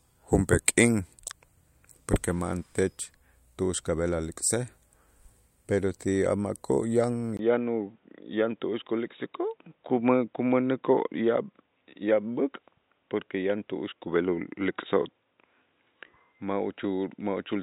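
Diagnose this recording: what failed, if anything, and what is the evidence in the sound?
At 7.37 s the speech turns abruptly dull and boxy after a brief gap of about 20 ms, and stays that way to the end. Nothing is left above 3.8 kHz, a faint new background noise sits far beneath the speech, and the loudness barely changes. The fault lies at the driver or device stage. The likely cause is the input switched to a poorer device, such as a headset's narrowband call profile, replacing the original microphone mid-recording.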